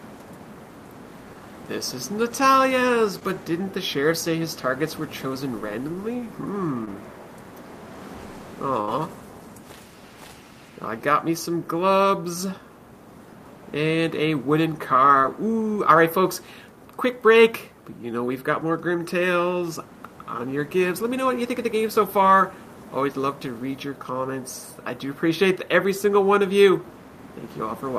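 Short concealed packet loss appears at 3.19, 6.85 and 15.21 s: roughly 20 ms never arrived, and the receiver continued the preceding sound briefly, leaving a tiny smear or wobble. A burst of packet loss at 8.81 to 8.90 s is longer, with about 60 ms missing and 67 ms filled, so the last sound is held and fades before the audio resumes further on.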